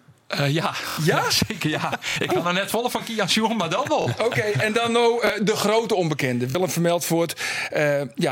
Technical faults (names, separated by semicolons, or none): repeated buffer